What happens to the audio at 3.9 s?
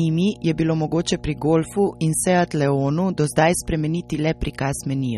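At 3.9 s, as across the whole speech clip, mains hum sits under the signal: a steady 60 Hz tone from power-line coupling, roughly 20 dB below the speech. The audio also shows plainly audible damage likely from MP3 compression. Nothing remains above 14.9 kHz, and weak spectral detail flickers with a watery, swirly quality, which fits a starved bitrate of around 32 kbps.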